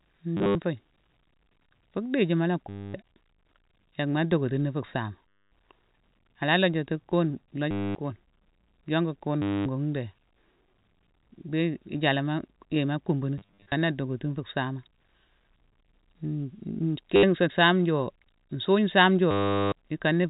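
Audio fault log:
0.37–0.55, 2.69–2.94, 5.47 (after "fu saama"), 7.71–7.95, 9.42–9.66 (after "yoncku kune"), 13.38–13.72, 17.16–17.23, 19.31–19.72 s: packet loss with last packet repeated. Missing audio is filled by replaying the previous fragment, giving a robotic stutter buzzing near 100 Hz, which fits 10 ms packets. On a spectrogram this shows as identical repeating tiles.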